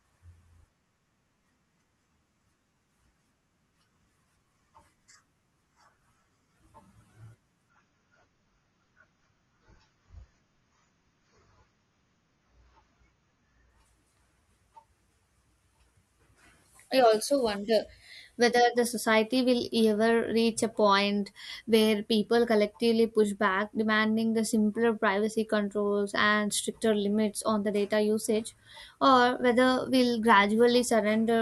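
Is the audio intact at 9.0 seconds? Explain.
No. From 7.7 to 13.7 s the adaptive stream drops to a lower bitrate, switching abruptly without a gap to a lower-quality version. Nothing is present above 6.9 kHz, and codec artefacts thicken, which fits AAC at roughly 24 kbit/s.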